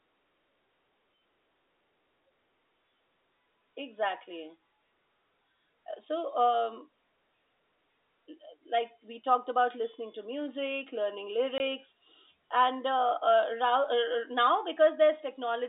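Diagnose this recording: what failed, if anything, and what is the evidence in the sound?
Network stage: packet loss filled with silence at 11.58 to 11.6 s, a single 20 ms packet replaced by silence. The waveform drops flat, and the spectrogram shows a blank stripe.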